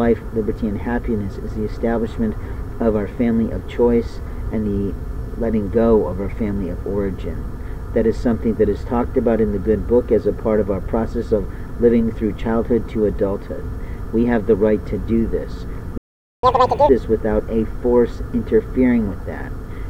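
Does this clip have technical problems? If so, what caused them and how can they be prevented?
Yes. A playback stall runs from 15.98 to 16.43 s: the sound halts mid-flow for about 455 ms, most likely because the player's buffer ran dry or its thread was blocked. The waveform drops to a flat line and the spectrogram shows a blank vertical band. A larger playback buffer and a player thread that never waits on slower tasks would prevent it.

Catch-up at higher speed follows from 16.43 to 16.89 s, as the player plays its backlog at 2.0 times normal speed, so the pitch jumps by close to ten semitones before settling. On the spectrogram, harmonics shift sharply upward and compress in time. Dropping the late material or time-stretching without changing pitch, rather than plain resampling, would prevent it.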